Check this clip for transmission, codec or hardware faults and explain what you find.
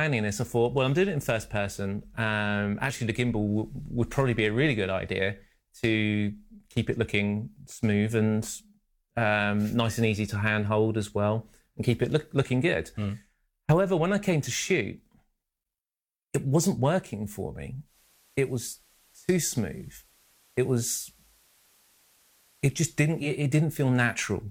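One transmission fault is present. From 17.83 to 23.33 s there is digital radio blending to analogue: the lost digital signal fades to FM, adding faint hiss, and the spectrogram empties above 15 kHz.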